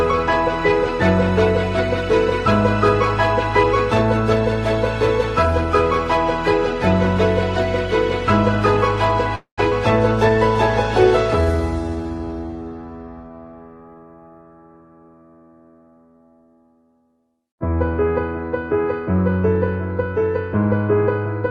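At 9.35 s the sound stops moving forward and becomes a call audio freeze. It lasts until 9.6 s. The last sound carries on as a buzzy tail that fades, and roughly its final 110 ms are silent. The likely cause is packets held up in transit, so the jitter buffer ran dry and the receiver had to invent about 221 ms of filler. When playback resumes, nothing is lost. It simply continues later.

A skip ahead follows almost at once, from 9.70 to 9.73 s. Playback jumps forward with only a tiny gap. Roughly a tenth of a second of audio is gone. The sound on either side is joined almost directly, so the cut is abrupt. This clawed back some of the delay the freeze had added, presumably by dropping audio that was already waiting in the jitter buffer.

From 11.41 to 12.04 s there is a jitter buffer slow-down. The sound runs at about 88% speed, but the pitch stays the same. Sounds are drawn out and a little stretched. 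The receiver repeated single pitch periods or bits of pauses many times over to rebuild its reserve. In all it added about 85 ms to the stretch.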